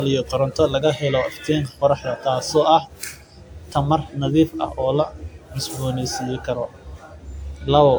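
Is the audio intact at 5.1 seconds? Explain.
No, at 5.1 seconds there's generation loss running through the whole clip: swirly, hollow, smeared speech with blurred attacks, likely from around ten passes through a WMA-style codec near 128 kbit/s.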